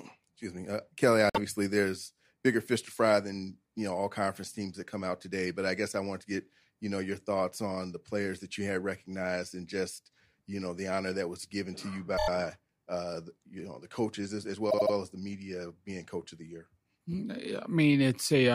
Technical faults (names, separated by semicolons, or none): repeated frames